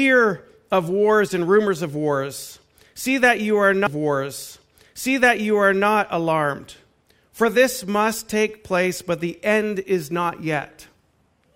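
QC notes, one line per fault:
3.86–5.85 s, stream segment repeated: about 2.0 s of the speech plays a second time after a small blip at the jump back, because the player fetched or queued the same segment twice. A whole stretch recurs once, unlike a stutter's short rapid loops or an echo's overlapping copy.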